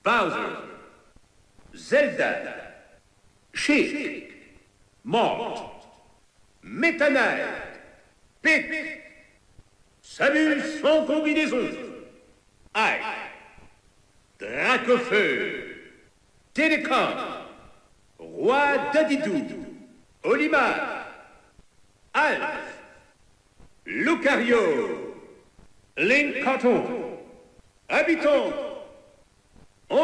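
Nothing in this audio stands out as a technical fault, so there's nothing to point to along the way.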